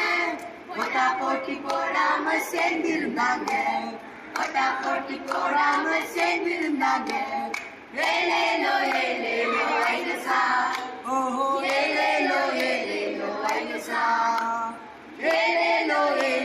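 No technical faults are audible.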